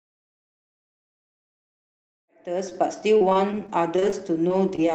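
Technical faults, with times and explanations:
2.69–2.73 s, short concealed packet loss: a brief smear as about 20 ms of audio never arrived and the receiver continued the preceding sound to cover the hole.
2.73–2.77 s, short stall from a late packet: the sound holds slightly too long because the jitter buffer ran dry and stretched it for about 18 ms until the packet arrived.
3.17–4.94 s, repeated packet loss (robotic sound): choppy audio with twelve separate gaps, the longest 32 ms. Each gap is patched by continuing the last sound, leaving about 200 ms missing.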